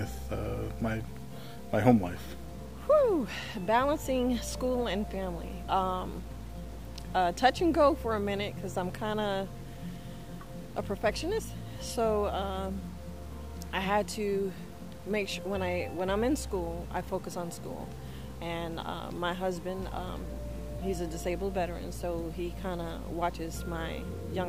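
Throughout the clip, a grainy distortion rides on the signal about 30 dB below it, roughening quiet passages and sputtering at the lowest levels. This is low bit depth without dither, likely undithered truncation consistent with an 8-bit word length.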